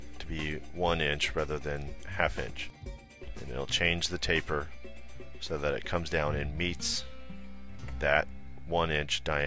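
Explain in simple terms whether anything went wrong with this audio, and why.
Nothing went wrong here.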